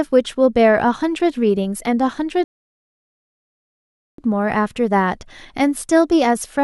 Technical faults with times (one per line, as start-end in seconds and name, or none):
2.44-4.18 rebuffering stall